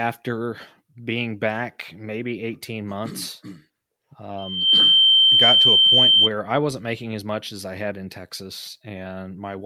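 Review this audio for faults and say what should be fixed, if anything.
A piercing single tone at 3.1 kHz swells up over the speech in roughly a third of a second, starting at 4.38 s, and sits well above the voice, something like 15 dB louder, until it cuts off at 6.30 s, just before "I wasn't making as". This is loudspeaker feedback squeal: the microphone was hearing its own loudspeaker, and at 3.1 kHz the loop gain rose above one, so that frequency kept amplifying itself.

To prevent it, lower the loudspeaker gain, move or aim the microphone away from the speaker, or notch out 3.1 kHz in the feed.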